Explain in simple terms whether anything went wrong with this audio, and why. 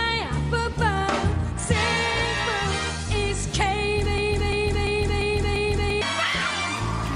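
From 4.18 to 6.02 s there is a broken-record loop: the same 0.34-second piece repeats exactly, back to back, without fading like an echo, likely because playback stalled.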